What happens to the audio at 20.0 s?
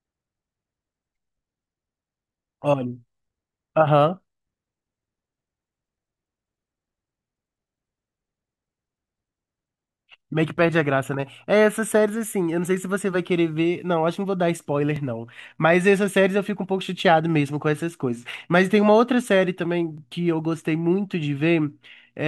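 At 19.98 s there is a join between overlapping chunks: the next 5-second chunk begins about 12 ms before the previous one ends, so that sliver of speech plays twice, heard as a brief click. The waveform shows a sudden discontinuity there, and the spectrogram shows a thin vertical broadband line.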